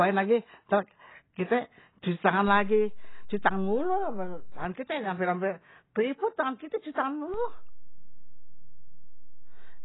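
Throughout the speech nothing sounds above 5.7 kHz, and the dull, smeared, warbling texture points to heavy AAC compression, likely at a low bitrate around 16 kbps. A DC step shifts the waveform's zero line at 2.48 s, causing a low thump, and it steps back at 4.65 s with another thump. A second step at 7.34 s thumps and holds to the end.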